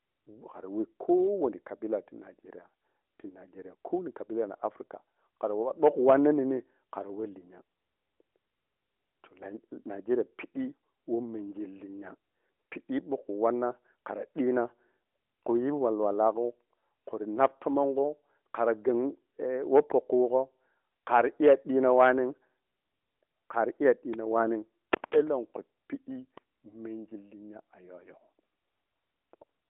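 No technical fault can be heard in this speech recording. It has come through an AMR narrowband mobile codec, so the sound sits in a telephone band of roughly 250 Hz to 3.5 kHz with nothing above about 3.8 kHz, and the light coding texture fits AMR-NB's highest 12.2 kbps mode.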